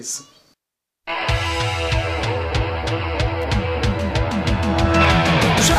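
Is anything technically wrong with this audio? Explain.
Yes. At 3.42 s there is an electrical switching spike. It is a sharp snap or tight cluster of clicks laid over the sound, peaking at about -20 dBFS. The likely cause is a nearby switch, motor or static discharge arcing briefly, with the audio line picking up that burst.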